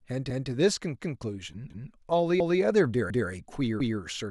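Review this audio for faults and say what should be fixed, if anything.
Overlapping chunks put a 200 ms repeat of the speech at 0.30, 1.00, 1.70, 2.40, 3.10 and 3.80 s, each lasting 0.2 s. Every 0.5 s chunk restarts 200 ms early, producing a regular stutter. On a spectrogram, identical 200 ms patterns sit side by side, with a vertical seam at each join. Fix the chunking so each chunk begins exactly where the previous one ended, or crossfade and discard the overlapping region.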